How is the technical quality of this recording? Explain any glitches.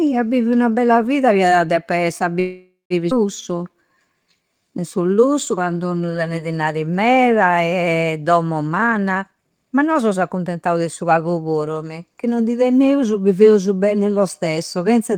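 The recording has four network-related glitches in its first 11 seconds. Each one disturbs the timing of the speech rather than its tone.

From 2.39 to 2.93 s, just after "esse a", there is a call audio freeze. The last sound is stretched into a buzzy tail that fades, with about 160 ms of near-silence inside it. The likely cause is delayed packets leaving the jitter buffer empty, so the receiver filled roughly half a second. When the speech resumes, it picks up exactly where it stopped. That is the difference from a skip: a gap is added, but nothing is lost.

At 3.10 to 3.14 s the audio skips ahead. Roughly 0.4 s of speech was dropped while later audio was already queued, either lost in transit or discarded by an overfull jitter buffer. The two sides are joined with only a tiny fill of a few milliseconds. Unlike the freeze just before it, there is no hanging tail or pause, only an abrupt jump with material missing.

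From 3.53 to 6.18 s, leading into "tenne dinari meda", a jitter buffer slow-down makes the speech run at about 87% speed. The buffer was running short, so the receiver repeated single pitch periods and bits of pauses over and over, adding about 360 ms in total. The pitch stays the same while sounds drag out. Unlike a freeze, the extra time is spread through the phrase instead of forming one stall.

From 8.67 to 11.18 s, up to "puru mì", a jitter buffer speed-up makes the speech run at about 120% speed. Too much audio had built up in the buffer, so the receiver cut out short slices of one or a few pitch periods many times in a row, removing around half a second. The speech sounds hurried while the pitch stays the same. Unlike a skip ahead, the loss is spread out in tiny pieces, so no single jump can be heard.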